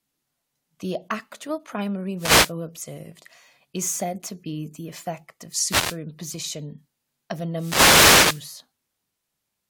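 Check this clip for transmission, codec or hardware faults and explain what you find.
Three wireless microphone noise hits break up this speech, from about 2.17 to 2.53 s (after "actual primary", before "observed is said to"), 5.64 to 5.98 s (after "be the effect of"), and 7.51 to 8.52 s (after "of a"). Each time the analogue FM radio link faded as reflected paths cancelled, so receiver noise climbed over the voice. The first two are brief swishes of static; the last lasts about a second.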